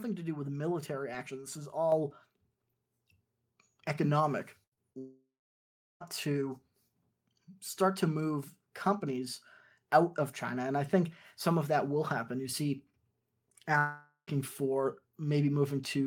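A microphone volume step-up at 1.92 s raises the level by about 6 dB in one jump, as the call software boosted the input gain.

A burst of packet loss at 4.63 to 4.73 s drops about 80 ms of audio. The receiver extends the last sound into a fading buzz or hiss, then resumes further on.

Two short concealed packet losses follow, at 4.73 to 4.79 s (40 ms missing) and 4.93 to 4.96 s (20 ms missing). Each brief hole is patched by continuing the preceding sound, leaving a smear or wobble.

At 4.98 to 6.02 s the sound fades out and then goes silent for about 0.7 s, most likely a long network dropout. Roughly a second of audio never arrives, and playback returns further along.

At 13.78 to 14.29 s a second stretch fades and briefly goes silent for about 0.1 s. This is likely another long network dropout, costing half a second of audio before playback picks up again.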